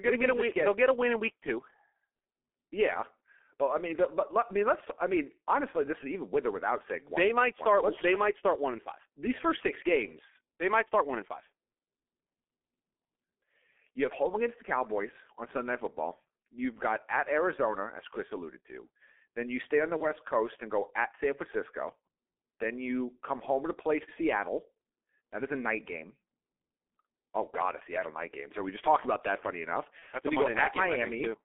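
G.723.1 codec damage runs from start to finish: the speech is confined to roughly 250 Hz to 3.4 kHz and sounds muffled and hoarse, with smeared consonants. The heavy coding loss and slow-updating voice model fit a low bitrate around 6 kbit/s with 30 ms frames.

VoIP packet loss concealed by the speech codec occurs at 19.97 to 20.06 s, just after "you stay on the", and again at 29.99 to 30.03 s. Each gap points to a single lost 30 ms frame. The decoder filled it by extending its last pitch and filter at falling gain, leaving a brief fading smear of buzz or coloured noise, and the voice recovers only gradually after the gap.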